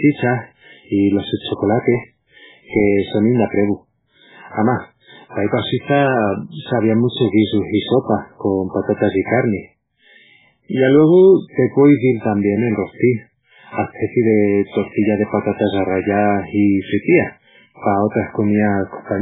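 Right from the start and through the whole clip, the speech has a heavily degraded, watery quality, and nothing comes through above about 3.8 kHz. That points to MP3 compression as the likely cause, at a very low bitrate, which fits something around 8 kbps. Starved of bits, the encoder drops weaker frequency lines that flicker in and out between frames, giving that swirly texture, and it cuts the top end at a fixed point, which explains the dull, band-limited sound.

From 1.79 to 2.87 s there's a burst of processor overload crackle riding over the speech. The processing couldn't finish its tiny audio buffers, each well under a millisecond, on time, and it missed dozens of deadlines in that stretch. Every miss left a short gap of silence with hard edges, and packed together those dropouts come across as gritty, tearing crackle that stops once the load eases.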